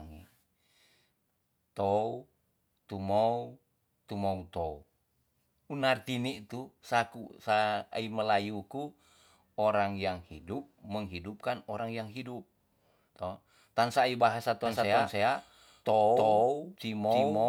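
Doubled audio track from 14.66 s to the end: a dry copy at about the same level trails by about 300 ms, likely recaptured via a slower path.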